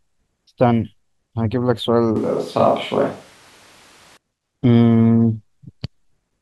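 From 2.16 to 4.17 s, speech abruptly turns roomy, hollow and bass-light over noise about 30 dB down, likely a switch to a distant microphone.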